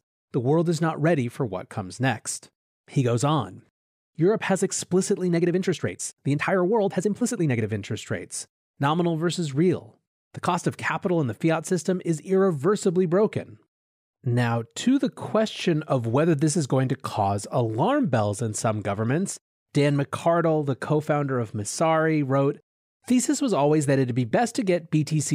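From 5.25 to 7.65 s the speech turns rushed at unchanged pitch, a time-stretched section, likely squeezed by software to 1.37 times speed.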